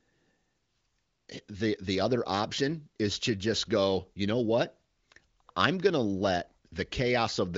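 No technical faults can be heard in this speech recording. It has the sound of the AMR wideband (HD Voice) codec at one of its higher rates, with nothing above about 7.6 kHz and at most faint coding roughness.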